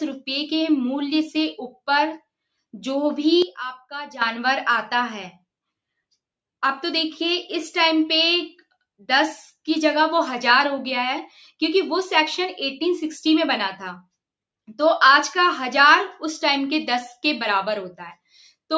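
At 3.42 s the level drops abruptly by about 12 dB, sound and background noise together, and jumps back at 4.21 s: a sudden gain jump. The likely cause is a gain change applied between adjacent samples without a ramp.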